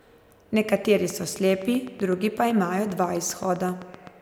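Speech with a train of clicks running from 0.85 s to 4.08 s: evenly spaced, near-identical pulses at about 7.8 per second, around thirty in all, ticking over both the voiced passages and the gaps. Their peaks rise roughly 5 dB above the speech level. The regular spacing and constant shape likely point to an external injection source, such as interference from nearby equipment or a faulty connection or power supply.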